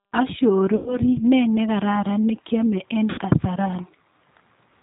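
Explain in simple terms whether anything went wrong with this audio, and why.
G.729 codec compression runs through the whole recording. This phone-call codec rebuilds speech from a rough model of the voice, not the real waveform, and drops everything above 4 kHz, so the speech sounds muffled, slightly rough and synthetic throughout.

VoIP packet loss concealed by the speech codec occurs twice: from 0.76 to 0.98 s, just before "ne nekararan ne kiame", and from 3.10 to 3.21 s, right after "nekararan ne kiame en". About 100 ms and then 80 ms of audio went missing. The decoder filled each gap by stretching the last sound into a fading buzzy tone or noise, and the voice stays weak briefly afterwards.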